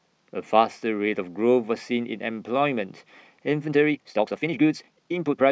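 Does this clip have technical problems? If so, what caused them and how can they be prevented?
Yes. From 3.64 s to the end, the speech suddenly runs about 1.86 times faster with unchanged pitch, sounding rushed: a time-stretched section, likely from software squeezing the audio to fit a length by dropping short pieces while preserving pitch. To prevent it, edit the material to the required length instead of compressing it in time.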